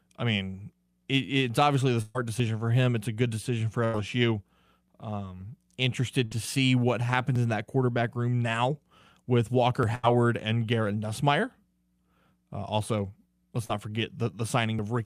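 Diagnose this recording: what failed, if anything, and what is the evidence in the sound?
The network path dropped audio in four bursts of packet loss: at 2.01 to 2.17 s, just after "it's obviously the"; at 3.85 to 3.95 s; at 6.25 to 6.33 s; and at 9.95 to 10.05 s. The gaps run about 140, 80, 60 and 80 ms. In each one the receiver's concealment extends the last sound and fades it down. The speech then picks up further along, and the audio that fell in the hole is simply gone.

Five skips of audio are missing between chunks, at 2.40, 4.88, 7.36, 9.83 (right after "quarterback room now with") and 14.79 s. Each joins the two sides with no silence and removes a couple of hundredths of a second. The steady spacing of roughly 2.5 s points to the capture driver or buffer stage, likely a recorder processing fixed 2.5 s blocks and losing a sliver of audio at each handover.

One short concealed packet loss sits at 13.65 to 13.71 s, just after "also let's". 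About 40 ms never reached the decoder in time. The receiver filled that gap by continuing the preceding sound and then blended back into the real signal. The result is a brief smear at that point rather than an audible dropout. This is a network-stage loss, only short enough for concealment to cover it.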